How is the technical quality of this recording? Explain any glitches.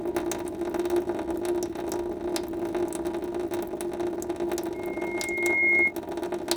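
The recording has one clear glitch, a loudspeaker feedback squeal from 4.74 to 5.93 s. A pure 2.1 kHz tone swells over about a second until it sits roughly 10 dB above the sound. A microphone was picking up its own loudspeaker. At 2.1 kHz the loop gain passed one, so that tone kept feeding itself.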